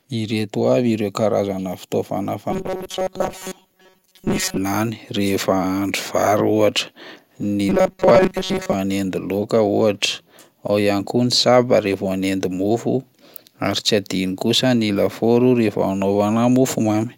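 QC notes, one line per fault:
2.51–4.57 s and 7.69–8.73 s, robotic sound from repeated short buffers: speech turns into a rigid metallic buzz pinned at 188 Hz, loosely following the words. Likely audio arriving too late, so a roughly 5 ms chunk keeps looping over most of the real signal.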